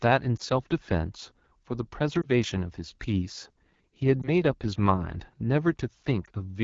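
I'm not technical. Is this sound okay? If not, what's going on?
No. The whole recording goes through the AMR wideband (HD Voice) codec at one of its lowest settings, so the speech sounds rough and raspy all the way through, as if the voice were squeezed through a narrow, gritty pipe.

There are also four lost AMR speech frames, at about 0.37, 2.22, 4.22 and 6.25 seconds. Each time, a tiny slice of the signal dropped out and the decoder patched the gap by repeating the previous sound, so you hear a brief dip or warble.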